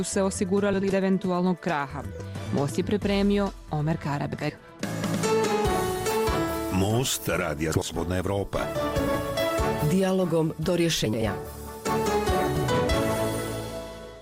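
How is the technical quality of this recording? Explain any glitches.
The recording is marred by seven brief glitches from frames out of order, at 0.73–0.93, 2.03–2.22, 4.33–4.51, 7.73–7.94, 8.99–9.16, 11.05–11.23 and 12.47–12.64 s. In each, two adjacent blocks of about 80 ms were decoded in swapped order, so the sound's halves play exchanged. This gives a garbled flutter but no lost time. On a waveform or spectrogram, each shows abrupt discontinuities and mismatched spectral texture at those seams.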